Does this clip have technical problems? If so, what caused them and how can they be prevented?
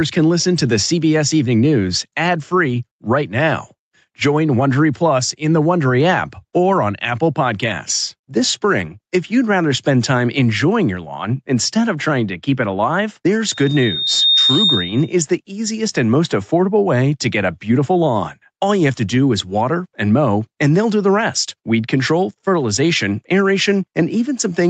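Yes. Gain pumping runs through the whole clip, with the level swinging by roughly 5 dB. The likely cause is microphone gain set much too high, with a fast limiter or compressor clamping down on every loud syllable and releasing in the gaps. This squeezes loud and quiet passages toward the same level and leaves the speech sounding flattened. To prevent it, lower the input gain so the limiter rarely has to act, and give it a slower release.

A loudspeaker feedback squeal sounds from 13.51 to 15.19 s, starting after "keep it alive there's" and ending before "the easiest and most." A single tone at 3.7 kHz swells over about 0.7 s until it sits about 5 dB above the speech. The microphone is picking up the loudspeaker it feeds, and at this one frequency the loop gain exceeds unity, so the tone keeps reinforcing itself until the loop is broken. The content above 8 kHz is missing throughout, which comes from the call codec's bandwidth rather than from either fault. 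To prevent the squeal, use headphones or keep the microphone away from the speaker and turn the monitor level down.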